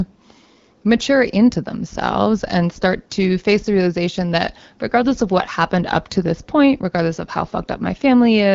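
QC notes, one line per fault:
No faults found.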